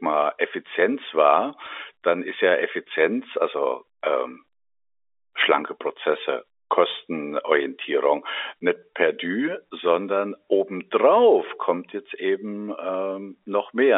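Telephone speech carried over a G.711 A-law line, which fits a 64 kbps digital link and is audible as a narrow band of roughly 300 Hz to 3.6 kHz, is hit by bit errors on a digital phone line from 1.64 to 1.67 s, just before "dann ist ja". A flipped bit, around one in a thousand here, corrupts single samples, producing a brief burst of sharp ticks. On the waveform these show as isolated needle-like spikes, and on a spectrogram as thin vertical lines spanning the full band.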